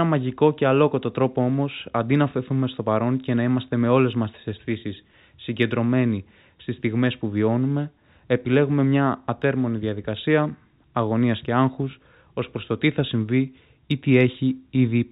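No technical faults can be heard in the speech, which comes over a call path with nothing above 4 kHz and the light coding grain of a narrowband telephone codec, a sound that fits G.711 mu-law at 64 kbps.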